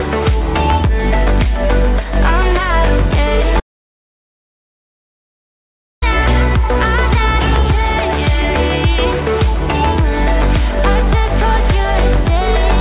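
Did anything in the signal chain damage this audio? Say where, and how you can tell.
Yes, there's an audio dropout to silence from 3.60 to 6.02 s: everything cuts to silence, no room tone, likely a lost input device or driver.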